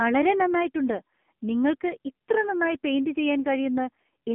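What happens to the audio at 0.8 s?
AMR narrowband mobile codec damage is present at 0.8 s, as it is across the whole recording. The speech has been squeezed through a mobile speech coder that resamples to 8 kHz and rebuilds the voice from a vocal-tract model driven by sparse pulses. Only roughly 150 Hz to 3.4 kHz survives, with nothing above 3.4 kHz. The heavy buzzy, synthetic coloration points to a low-rate mode around 6.7 kbps.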